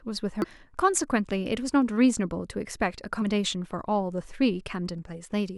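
Damaged data in the compressed stream causes brief glitches at 0.42 to 0.44 s and 3.21 s, where the decoder misreads corrupted frames and loses sync.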